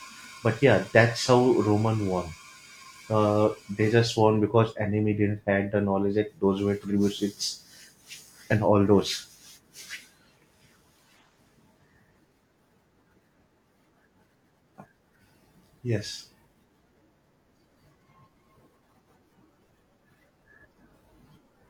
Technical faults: none

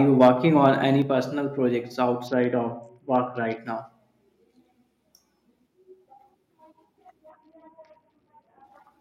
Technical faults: microphone overload; microphone volume stepped down; Bluetooth SBC bit pool drop

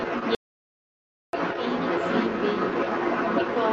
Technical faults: other side's voice leaking through; audio dropout to silence

